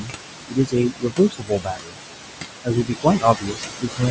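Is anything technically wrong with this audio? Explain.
Yes. Throughout the clip you can hear noise suppressor artifacts. The room noise sits only about 5 dB under the speech, and the suppressor pulls it down by about 21 dB in the gaps, then lets it back up under the talking.

The other problem is speech cut by the noise suppressor. It happens from 0 to 0.12 s (deepest drop about 14 dB), from 0.48 to 1.98 s (about 22 dB), and from 2.64 s to the end (about 20 dB). Here the suppressor mistakes parts of the speech for noise and turns them down along with the background. Across each of the longer stretches, around a second of material sounds swallowed or faded.

The top end stopping at 8 kHz comes from the call's microphone processing, and that's expected.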